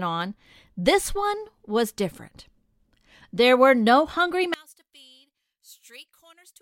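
Right after "were no hungry", at about 4.54 s, the speech drops by about 26 dB and stays down until the end. Everything goes, background included, leaving only a much quieter residue. The likely cause is one channel inverted: one side of a stereo source had its polarity flipped, so when the two were folded down to mono, everything they shared cancelled and only the small difference between them came through.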